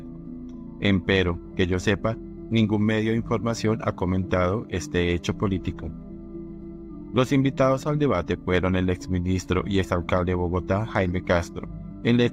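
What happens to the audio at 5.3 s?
Nothing goes wrong at 5.3 s; the audio runs through that moment without any audible fault.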